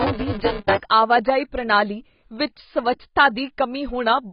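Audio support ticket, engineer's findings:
Buffer tearing, 0.0 to 0.8 s, ending just before "ਆਵਾਜਾਈ ਪ੍ਰਣਾਲੀ". Robotic buzz at 200 Hz, present only under signal. Points to the output ring buffer, with a 5 ms period. Writer and reader pointers have slipped and cross inside each period. Something under half of each buffer replays audio from roughly 15 ms earlier. Hard joins on both sides of the stale part. The joins repeat at the buffer rate, which gives the buzz.

AAC compression, whole clip. Speech is dull and smeared, with a heavy warbling, fizzy texture on sibilants and held sounds. Nothing above 5.3 kHz. Likely a low-bitrate AAC-LC encode, consistent with about 16 kbps. The encoder dropped its cut-off to 5.3 kHz. Quantisation too coarse for the hearing model left spectral holes, and frames flicker as bands come and go.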